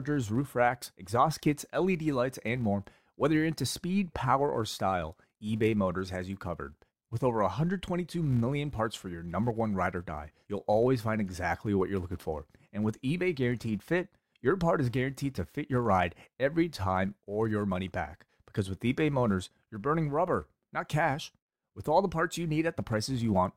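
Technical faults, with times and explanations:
Throughout, filter restarted on every block. The filter loses its memory at each block boundary and starts again from silence. Each restart leaves a small transient. These repeat 200 times per second, which fits 5 ms blocks. The result is a 200 Hz buzz that rises and falls with the speech level.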